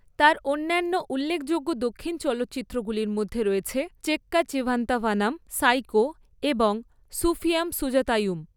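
Nothing stood out as a technical fault on listening to this speech recording.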